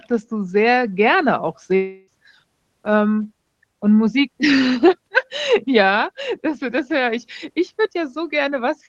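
Long network dropout from 1.75 to 2.10 s in this speech recording: the sound smears into a fading buzz or hiss continuing the preceding syllable for about a third of a second, then speech resumes with that stretch missing, likely because packets stopped arriving and the receiver filled the gap. The call codec limits the band to about 12 kHz throughout.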